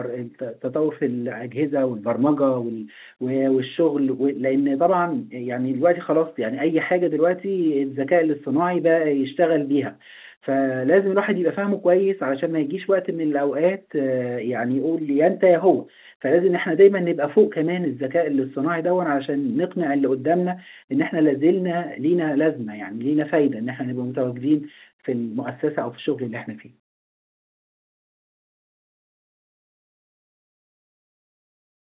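The clip is speech carried over G.711 mu-law telephone coding at 8 kHz, and nothing is technically wrong with it.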